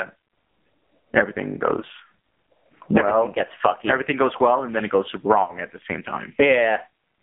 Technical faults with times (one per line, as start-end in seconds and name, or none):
0.00-7.22 AMR narrowband mobile codec
1.80-1.85 lost AMR speech frames
5.44-5.51 lost AMR speech frames